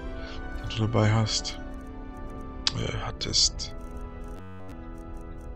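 From 4.37 to 4.72 s the audio turns into a rigid, metallic buzz at about 94 Hz: robotic sound from repeated short buffers, likely because new audio arrived too seldom and one short block, about 10.7 ms long, was replayed to fill the gap while the real audio was skipped. Essentially the whole stretch is repetition. A waveform shows identical segments recurring every 10.7 ms, and a spectrogram shows evenly spaced harmonic lines at multiples of 94 Hz.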